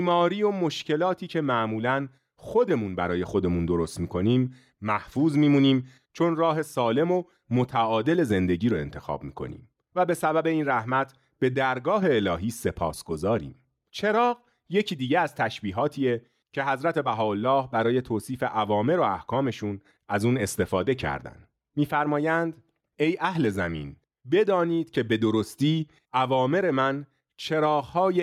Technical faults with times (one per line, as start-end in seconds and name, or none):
none